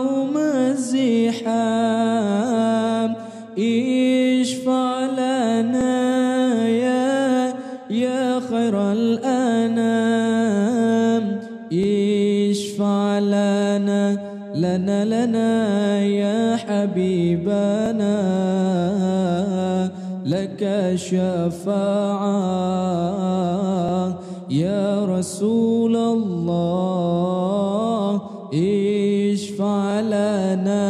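At 5.81, 11.84, 17.86, 23.89 and 29.91 s there is a brief stutter or click, caused by overlapping chunks. The audio was handled in pieces of about 6 s, and each new piece began 25 ms before the previous one finished, so that 25 ms sliver plays twice at every join. Unlike a dropout, nothing goes missing. The sound briefly repeats, and the evenly spaced timing rules out random glitches.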